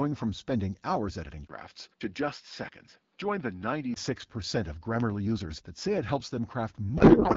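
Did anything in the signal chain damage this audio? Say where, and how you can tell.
Yes. From 1.47 to 3.96 s the speech turns dull and slightly quieter, with nothing above 5.5 kHz, a 20 ms gap at the switch, and faint new hiss. That points to an input switched to a poorer device, likely at the driver stage.

At 5.00 s a single sharp pop, a little louder than the speech, sits on top while the speech continues. It is a loud pop, likely a voltage pulse in the analogue wiring.

From 6.97 s to the end the speech dissolves into garbled warble. This is a codec payload misread: octet-aligned AMR packets decoded as bandwidth-efficient, so every field lands in the wrong place.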